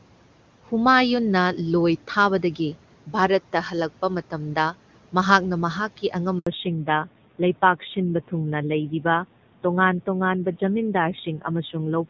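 Speech cuts to silence for 80 ms at 6.39 to 6.47 s, a handover gap where no speech frames arrived while the call switched networks. From 6.47 s to the end the speech turns dull and rough with nothing above 4 kHz, a fallback to narrowband that points to a drop from HD Voice near 23.85 kbit/s to an older codec around 7.4 kbit/s.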